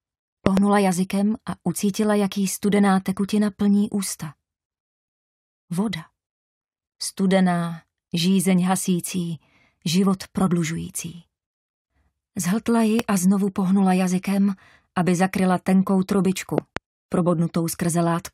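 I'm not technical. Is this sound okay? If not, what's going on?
No. A sudden electrical jolt, likely from a plug, switch or static discharge, got into the signal three times, causing a loud pop: two quick pops at 0.46–0.59 s, one at 12.99–13.02 s, and two more at 16.58–16.79 s. Each is a sharp snap much louder than the recording, while the sound carries on underneath.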